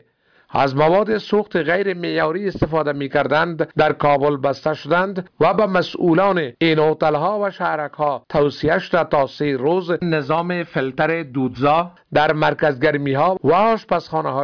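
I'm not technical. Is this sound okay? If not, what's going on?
Yes, it sounds fine; nothing here needs fixing.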